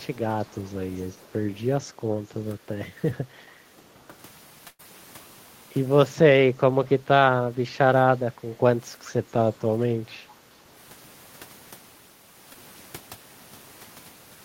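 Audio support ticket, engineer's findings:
Echo leak, 0.99–1.33 s and 9.04–9.09 s: faint delayed copy of the talker, 0.43 s behind, roughly 25–30 dB down. Likely far-end speakerphone echo canceller letting residual through. A repeat, not a room tail.

Background gated by the echo canceller, 3.48–3.83 s and 8.46–8.57 s: room noise dips about 9–10 dB, then returns. Canceller suppressing the mic during playback.

Burst of packet loss, 4.67–4.81 s: last sound held and faded, about 114 ms filled in all, ending in 50 ms silence. Resumes with 120 ms gone. Jitter buffer concealment. Longer and with audible missing content, unlike a short smear.

Short concealed packet loss, 12.53–12.57 s: brief smear. 20 ms missing, patched by pitch/noise continuation and blended back. Too short for a held buzz or a silent gap.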